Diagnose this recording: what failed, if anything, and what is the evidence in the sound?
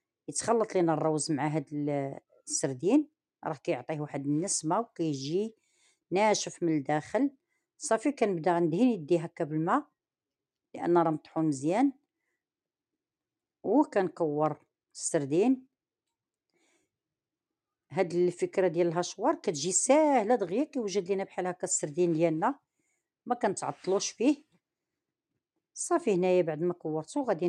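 Nothing failed: no stage from wiring through to playback leaves any audible fault anywhere in the recording.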